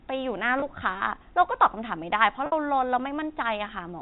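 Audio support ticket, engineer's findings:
Packet loss with pitch repetition at 0.60–0.62 s. About 20 ms gap, which fits one lost 20 ms packet. Sounds slightly held and buzzy. Receiver concealment repeats the last pitch period to bridge the hole.

Second packet loss with pitch repetition at 2.46–2.52 s. About 60 ms gap, which points to three consecutive lost packets. Repeated pitch period fades toward silence over about 50 ms. Audio resumes with a short cross-fade. Network path is the probable component. The G.711 telephone coding underneath is band-limited to 4 kHz.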